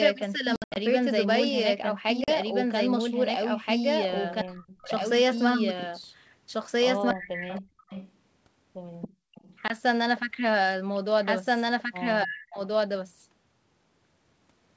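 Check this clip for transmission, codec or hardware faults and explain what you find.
Yes, there are several faults: a doubled audio track running throughout, three bursts of ADPCM packet loss, echo leak, speech suppressed in double talk, and one moment of background gating by the echo canceller.

Doubled audio track, whole clip. A second copy of the speech runs about one and a half seconds behind the first, at roughly the same loudness. It is likely caused by the audio being captured twice through paths of different delay, or by an edit that left two copies out of step. It sounds like a dry, full-band repeat with no room decay. On a spectrogram every syllable pattern reappears intact, shifted right by that lag.

Packet loss on an ADPCM call, at 0.56–0.78 s, 2.24–2.29 s and 9.68–9.76 s. In the first burst about 160 ms is lost, scattered over 200 ms, with the longest hole 80 ms. The second loses 40 ms and the third 20 ms. 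Each gap is true silence. The decoder's predictor and step size then resume out of step with the sender, so the speech comes back slightly distorted before settling. The waveform shows flat, sharp-edged holes.

Echo leak, at 4.39–4.43 s, 7.22–8.12 s and 9.01–9.56 s. A delayed copy of the speech arrives 282 ms late. It is about 25 dB down in the short first scrap and about 15 dB down in the two longer stretches. This is likely loudspeaker sound that the loudspeaker side's echo canceller failed to remove, which was then sent back. A spectrogram shows faint repeats of the formant tracks trailing the originals.

Speech suppressed in double talk, at 4.43–4.9 s, 7.13–7.66 s and 12.24–12.59 s. Here the talker's level dives, at its deepest by about 40 dB, over spans of roughly half a second. This is likely the echo canceller turning everything down because it could not separate the local talker from the loudspeaker echo while both sides spoke. 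The speech dips. The waveform envelope shows sudden notches, and the spectrogram fades to near blank in those spans.

Background gated by the echo canceller, 9.08–9.35 s. While the loudspeaker echo was active, the canceller clamped the microphone. The room noise drops by about 35 dB for roughly 300 ms and returns when the canceller releases. It is heard as a brief hole in the ambience. On a spectrogram the noise floor collapses to dark across all frequencies.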